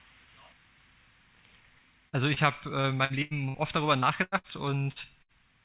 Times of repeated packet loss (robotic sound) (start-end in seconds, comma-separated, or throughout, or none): 2.81-3.57